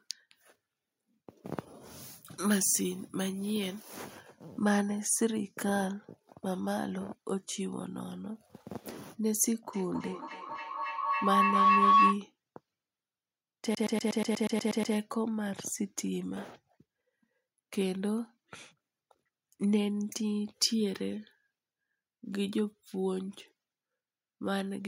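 From 9.73 to 12.25 s, a feedback howl forms: a microphone picks up a loudspeaker carrying the same call, and each trip round the loop adds gain. The repeats swell into a tone near 1 kHz, pulsing roughly every 0.3 s and peaking about 8 dB above the speech.

From 13.75 to 14.95 s, the fault is a CD stuck on one turn: the player jumps back to the same spot each revolution, so a 0.12 s fragment repeats ten times, each jump marked by a brief mute, giving a fast, even stutter.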